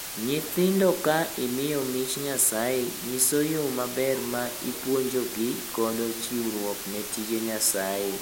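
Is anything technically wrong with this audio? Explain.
Yes. Throughout the speech, a low bit depth with dither is audible. The signal appears reduced to about 5 bits, with dither added before rounding. That turns the rounding error into steady white noise. It sounds like a constant, even hiss, roughly 5 dB below the speech.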